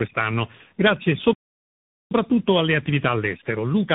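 From start to finish the speech sounds rough, boxy and warbly, with nothing above about 3.8 kHz. This is tandem speech coding: the signal was decoded and re-encoded at each link, so every coder worked on the previous one's already damaged output. The grainy, smeared texture fits a low-rate AMR narrowband stage feeding a telephone-band mu-law link and then a CVSD link, with each stage adding its own roughness to what came before.

At 1.33 s the speech cuts out mid-flow and stays silent for about 0.78 s, resuming at 2.11 s. This is a playback stall. The gap is long enough to hear clearly as a break. The likely cause is that the player ran short of incoming data or had its output thread held up, so it had nothing to send until it recovered.

From 2.11 s to the end the speech runs hurried, about 1.1 times normal speed, while its pitch stays natural. This is time-compressed catch-up: after the stall the player trimmed its backlog by cutting out small slices of audio and cross-fading the joins.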